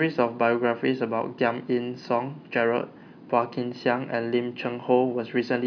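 No technical faults are audible in this recording.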